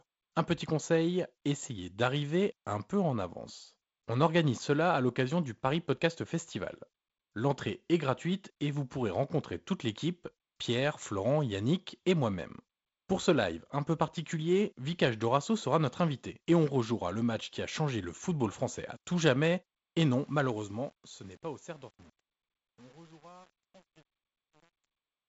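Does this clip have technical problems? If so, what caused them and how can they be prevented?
Yes. After "français à tout jamais", from 19.94 s to the end at 25.28 s, the fade-out shows truncation distortion. The fading speech turns gritty from 20.19 s onward, as the level drops to a few coarse steps, which fits an undithered 8-bit stage. To prevent it, apply fades at high resolution and add dither before any reduction in bit depth.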